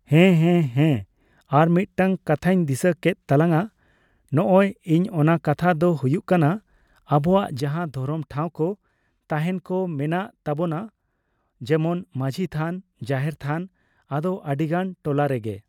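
At 7.6 s the speech and its background noise drop together by about 7 dB and stay there, a sudden gain jump likely caused by an unramped digital gain change.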